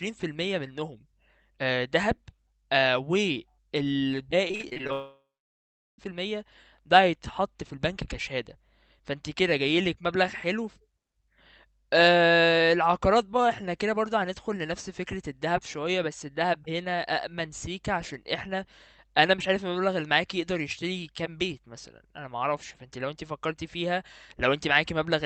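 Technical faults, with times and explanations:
4.47–4.90 s, repeated packet loss (robotic sound): eight short gaps, the longest 38 ms, patched by repeating sound, so about 40% is choppy filler rather than one hole.
4.92–6.0 s, long network dropout: a single 1.06 s hole; a fading buzz, then about 0.76 s of silence, likely from stalled network delivery rather than scattered losses.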